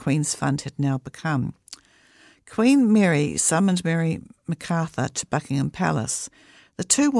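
No technical faults are audible anywhere in the speech recording.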